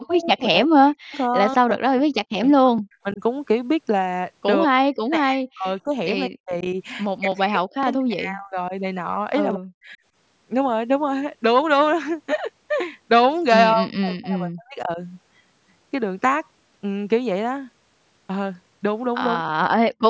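From 0.0 to 3.2 s the speech dips and breaks up. This is speech suppressed in double talk. Both sides were likely talking at once, so the echo canceller turned down the near talker too. The deepest drops reach about 40 dB.

Inside that stretch, at 0.15 to 0.26 s and 1.12 to 1.17 s, a faint delayed copy of the voice slips through. This is echo leak. It trails by 187 ms, at about 35 dB and then about 25 dB below the speech. The canceller likely missed part of the loudspeaker pickup.

The same suppression returns at 4.67 to 6.64 s, 7.19 to 8.73 s, 9.56 to 9.97 s, 13.74 to 14.99 s and 19.41 to 19.95 s. Each time the speech sinks or cuts out in pieces, again by up to about 40 dB.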